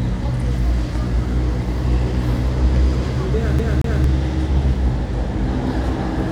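At 3.59 to 4.04 s the CD is stuck on one turn: the laser jumps back a track each rotation, so a 228 ms slice repeats twice with brief mutes.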